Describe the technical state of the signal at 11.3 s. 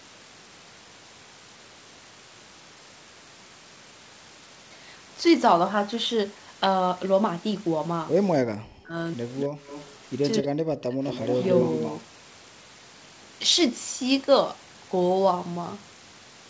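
Echo leak runs from 11.07 to 12.01 s, covering 11.3 s. A delayed copy of the speech, trailing the direct sound by about 226 ms and sitting roughly 10 dB below it, rides underneath as a doubled image. The likely cause is a far end playing the call over a loudspeaker, where the echo canceller failed to remove everything its microphone picked up and returned the remainder down the line, inside the usual 8 kHz call band.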